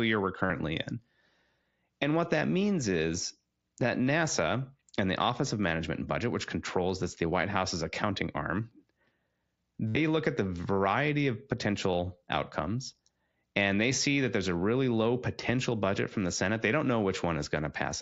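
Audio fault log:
0.46–0.50 s and 9.88–9.97 s, concealed Bluetooth headset packet loss: 45 ms, then a 75 ms run, refilled by repeating recent waveform, giving a buzzy full-level tone and a warble at the return; spectrograms show evenly spaced harmonic stripes, and waveforms show a repeating cycle.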